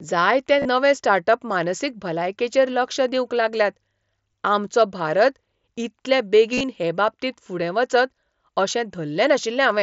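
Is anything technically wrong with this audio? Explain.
Yes, there is concealed Bluetooth headset packet loss at 0.59–0.65 s (just before "स्टार्ट अप"), at 4.32 s, and at 6.53–6.64 s. When headset packets drop, the receiver fills each gap by repeating a matching recent waveform stretch. The result is a brief buzzy, steady tone. A waveform shows repeated identical cycles at constant level, and a spectrogram shows flat, frozen harmonic stripes.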